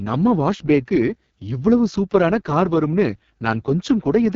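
AMR wideband (HD Voice) codec damage runs throughout the speech. The rough, raspy texture fits the codec's lowest mode, 6.6 kbit/s, where too few pulses drive the vocal tract model. The top band is just shaped noise, and nothing sounds above 7.5 kHz.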